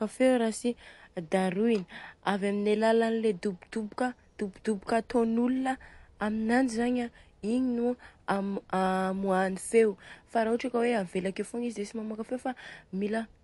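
MP3 compression runs throughout the speech, likely from an encoder starved of bits, which fits a bitrate near 48 kbps. It discards everything above 11.3 kHz and zeroes weak frequency lines frame by frame, leaving the damage plainly audible as dulled, unstable treble.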